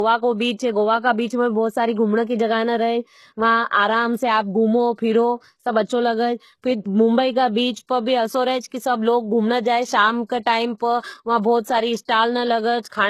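From start to finish, the speech has nothing above about 12.3 kHz and carries the smeared, swirly texture of heavy perceptual coding. This is a low-bitrate file saved at a high bitrate. The artefacts point to a very lean first encoding, such as HE-AAC near 16 kbit/s, that was likely re-encoded later as MP3 at something like 256 kbit/s. The larger second file keeps the earlier damage and the missing top band, and adds little of its own.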